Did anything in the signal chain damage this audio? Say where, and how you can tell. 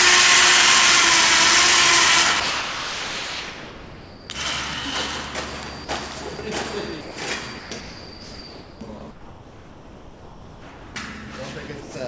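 Yes. Sound dropped by the voice detector at 2.40–4.30 s, 6.37 s and 7.01–7.17 s: the sound gives way to flat, even noise on a spectrogram, likely call-processing gating.

Comfort noise in place of the background at 7.59–7.71 s, 7.81–8.81 s, 9.11–10.95 s and 11.81–11.95 s: detailed background becomes uniform, featureless noise about 2 to 4 dB lower, likely discontinuous transmission.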